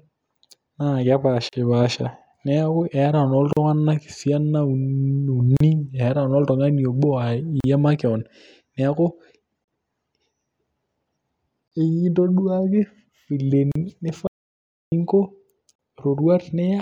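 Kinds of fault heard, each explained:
Gap at a join of encoded pieces: Silences of about 38 ms recur every 2.0 s, at 1.49, 3.53, 5.57, 7.60, 9.64, 11.68, 13.72 and 15.75 s, including just before and after "makeon neeku". Untrimmed encoder delay and end padding at each join cause them. Their short, regular spacing distinguishes them from a dropout.
Audio dropout to silence: From 14.27 to 14.92 s the speech cuts to silence for about 0.65 s, with no room tone, likely from the input being lost while silence was written. It is longer and one-off, unlike the brief, periodic join gaps.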